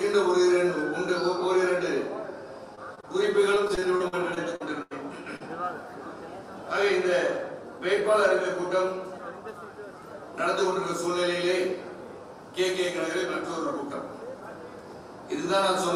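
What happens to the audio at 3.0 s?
Two short concealed packet losses fall at 2.95–2.99 s and 3.01–3.05 s, each about 20 ms missing and filled by extrapolating the preceding sound, leaving brief smears.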